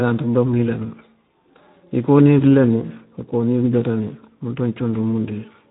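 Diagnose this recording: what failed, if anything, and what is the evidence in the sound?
The speech passed through a low-rate Speex codec at the codec stage. Throughout, nothing sounds above 3.8 kHz, and the plainly audible, rough, noisy texture fits roughly 11 kbps, where the CELP coder has too few bits to model the excitation cleanly.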